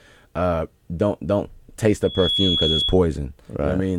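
A microphone picks up the loudspeaker it feeds, and at one frequency the loop gain tips above one, producing loudspeaker feedback squeal from 2.03 s to 2.98 s, just after "uh don't don't taste". A single tone near 3.4 kHz swells up over roughly a third of a second until it sits about as loud as the speech, then holds as a piercing squeal for about two-thirds of a second before cutting out.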